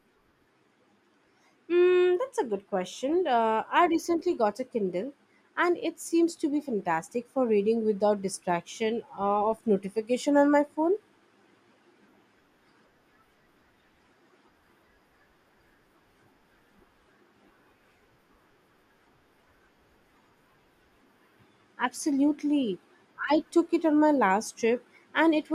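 No technical faults can be heard in this recording.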